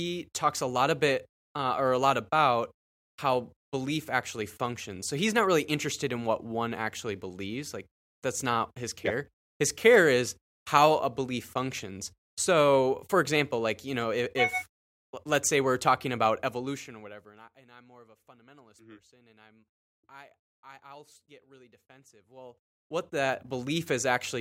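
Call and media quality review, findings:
No faults found in the speech recording.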